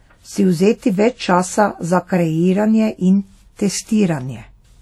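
A short speech recording with plainly audible WMA compression damage running the whole way through. There's a ringing, washy smear hanging around the speech and a hiss that seems to swell and fade along with it. That's likely a transform coder using long blocks, so the quantisation noise spreads out over tens of milliseconds around each sound, and weaker detail gets dropped entirely. The amount of damage fits a low bitrate, something around 48 kbps.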